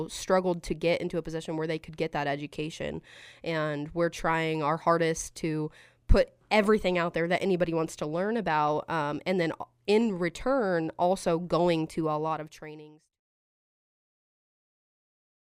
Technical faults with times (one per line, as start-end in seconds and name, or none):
none